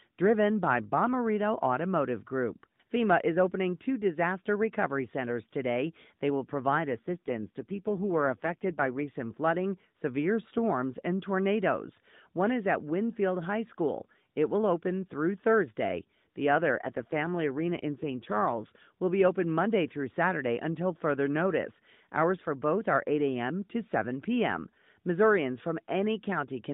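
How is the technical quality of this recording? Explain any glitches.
The recording is narrowband mobile-call speech with two short stretches where the quality audibly degrades. The AMR-NB phone codec that carries the whole clip cuts everything above 4 kHz and adds only light coding roughness.

The glitches are two AMR rate drops, from 6.87 to 9.09 s (ending just before "flooding severe storms and") and from 16.55 to 18.68 s (ending before "will be open"). When the radio link weakens, the codec spends fewer bits on the voice model and more on error protection. The sound points to a fall from roughly 12.2 to about 5.9 kbps. The voice turns buzzy and synthetic, then recovers. On a spectrogram the 4 kHz ceiling stays fixed, with no gap in the waveform, but harmonics smear and the formant structure coarsens during both stretches.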